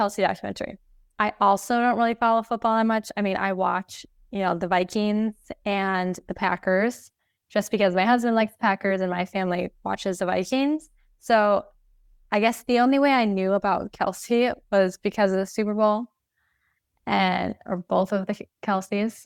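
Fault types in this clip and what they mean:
No technical faults detected in the speech.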